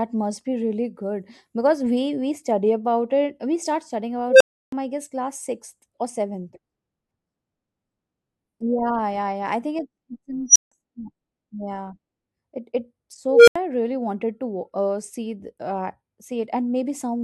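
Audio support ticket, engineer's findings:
Unstable filter, three events: 4.29–4.72 s (after "start studying"), 10.49–10.72 s (after "think it's it's in"), 13.28–13.56 s (before "i really wanted to"). Recursive stage with bad coefficients: a tone around 500 Hz, and around 5 kHz in the second event, swells over 0.06–0.19 s, clips, then drops to 0.08–0.32 s of silence until the filter resets. Unlike acoustic feedback howl, it ends in an abrupt dropout rather than sustaining.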